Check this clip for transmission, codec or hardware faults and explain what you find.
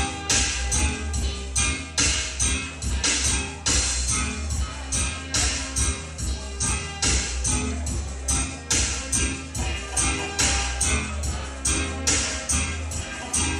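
Nothing in the clip suggests a fault. No break, distortion or other disturbance stands out anywhere in the audio.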